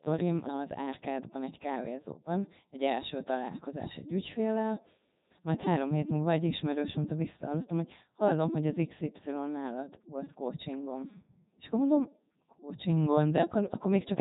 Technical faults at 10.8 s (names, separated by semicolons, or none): Codec 2 vocoder